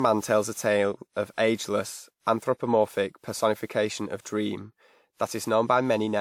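Speech with generation loss throughout: a swirly, hollow smear and blurred consonant attacks, with nothing above 19.6 kHz. That band limit fits a 128 kbit/s WMA encode, but a single pass would sound cleaner, so the artefacts likely come from around seven successive re-encodes.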